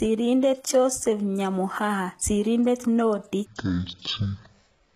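Throughout, the speech has gritty, metallic s sounds from HE-AAC compression, likely at a rate near 20 kbps. On a spectrogram, the treble looks copied upward from lower bands, and its harmonics do not line up across the crossover.

From 3.46 s to the end, a section at the wrong speed plays at 0.509 times, roughly ten semitones deeper. This is likely from a clock mismatch. Harmonics sink on the spectrogram, and the waveform visibly stretches.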